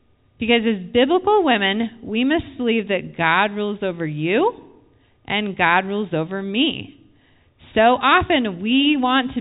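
No technical fault can be heard in the speech; it sits within the narrow band of G.711 telephone coding, with nothing above about 3.8 kHz.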